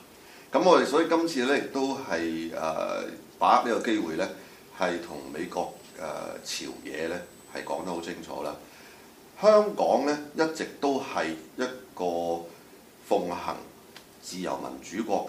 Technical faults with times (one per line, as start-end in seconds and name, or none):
5.07-8.07 USB whine